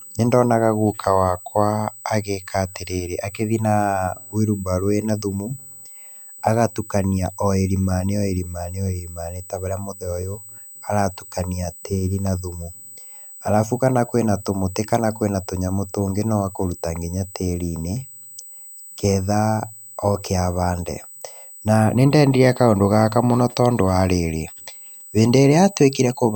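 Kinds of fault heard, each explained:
USB whine: There's a steady, fixed-pitch whine running under the speech for the whole clip, sitting at 8 kHz with its strongest component up at 16 kHz, roughly 20 dB below the signal. That 8 kHz spacing is the giveaway: it matches the 125-microsecond microframe rhythm of a high-speed USB bus, whose pulsed current draw is getting into the audio through shared power or ground.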